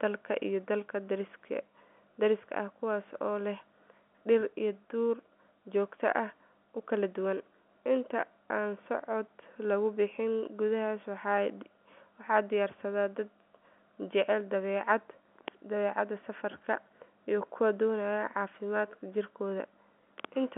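No technical faults can be heard anywhere in the speech. It has the narrow, boxed-in sound of a fixed-line call carried by G.711 telephone coding, with the line passing only about 200 Hz to 3.4 kHz.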